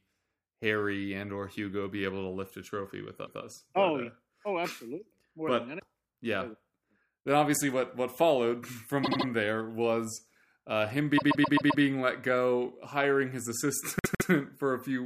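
Repeated frames occur four times in this speech, each a stutter where a run of compressed frames was stored or delivered more than once, so the decoder replays the same stretch. At 3.25–3.41 s a 157 ms block plays one extra time. At 9.03–9.26 s a 78 ms block repeats three extra times, and at 11.17–11.82 s a 131 ms block repeats five extra times. At 13.99–14.30 s a 157 ms block plays twice more. Together they add about 1.36 s to the audio.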